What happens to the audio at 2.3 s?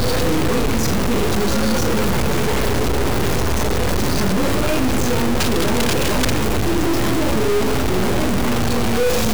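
A stuck bit, likely one data line held at a fixed value, runs through the whole clip, including 2.3 s. Values whose bit should differ jump by a step of roughly -15 dBFS, giving harsh, buzzy distortion and loud noise filling any quieter stretches.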